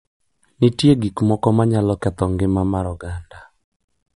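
MP3 compression throughout: treble stops at 11.1 kHz and the speech sounds watery and swirling, likely from an encoder short of bits, which fits about 48 kbps.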